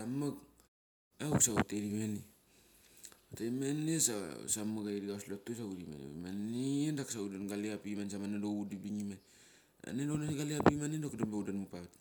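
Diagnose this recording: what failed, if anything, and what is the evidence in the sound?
Nothing failed; the speech shows no audible defect anywhere.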